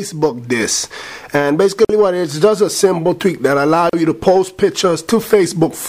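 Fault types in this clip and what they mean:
Gap at a join of encoded pieces: at 1.85 to 1.89 s (about 48 ms) and 3.89 to 3.93 s (about 38 ms), two seconds apart, the sound drops to silence and resumes where it left off. Each separately encoded piece kept its leading encoder delay and padded final frame, leaving gaps with smeared edges.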